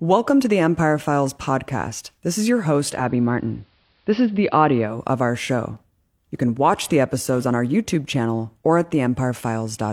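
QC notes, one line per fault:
2.88–5.04 s: digital radio blending to analogue. The receiver loses the digital stream and cross-fades over about 209 ms to the AM broadcast of the same station, then fades back at 5.04 s. A faint hiss rises, well below the signal. The level shifts by about 1 dB. The change is audible because the two paths differ in bandwidth and noise.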